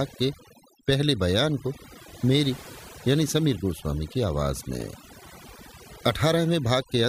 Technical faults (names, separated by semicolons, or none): overdone noise removal